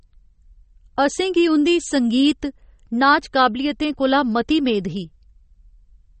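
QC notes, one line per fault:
Throughout: MP3 compression, likely, with the encoder short of bits, consistent with a very low rate near 32 kbps. It cuts all content above 8.4 kHz and discards weak frequency detail, leaving the speech dull and carrying plainly audible coding damage.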